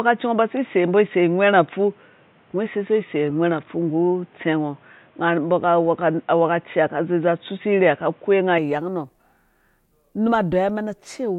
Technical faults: input switched to a poorer device

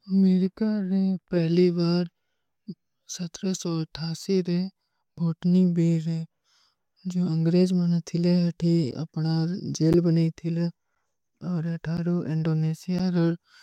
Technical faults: periodic USB or driver dropouts

